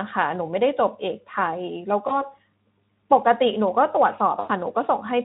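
At 2.07 to 2.29 s and 4.39 to 4.51 s, VoIP packet loss concealed by the speech codec smears the sound into a fading buzz rather than a silent gap. The losses fit one 20 ms frame and then about 100 ms.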